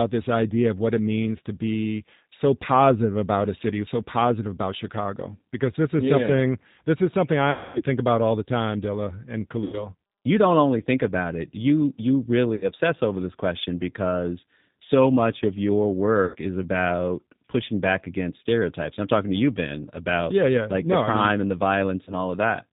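From start to end the speech carries G.729 codec damage: nothing above 4 kHz, and a rough, slightly synthetic edge from rebuilding the voice out of a vocal tract filter, a pitch predictor and sparse pulses. That graininess, and not just dullness, sets it apart from a simple low-pass.

VoIP packet loss concealed by the speech codec interrupts at 7.51–7.82 s, 9.64–9.88 s, 12.55–12.65 s, 16.25–16.35 s and 22.04–22.14 s. The longest gap points to roughly 240 ms of lost audio. Each gap is a stretched, buzzy tone or coloured noise that fades rather than silence, and the voice stays weak briefly after it.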